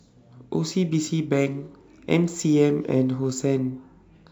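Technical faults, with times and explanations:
Throughout, sample clock jitter: the converter's timing wanders by around two microseconds, so each sample lands a little early or late at random. On a steep part of the waveform that small timing slip becomes a real level error, roughly 40 dB below the speech, so a faint hiss and graininess rides on the louder, brighter syllables and on sibilants, then drops away in the pauses where the signal is near silent.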